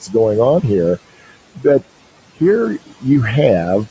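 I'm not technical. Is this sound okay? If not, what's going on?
No, not quite. Throughout the clip you can hear noise suppressor artifacts. A noise suppressor tries to remove steady background hiss from a call. Here it pushes the room noise down hard in the pauses, so the gaps go very quiet. When someone talks, the filter eases off and the noise comes back underneath. That pumping, in and out, is what you notice. The room noise itself sits well below the speech.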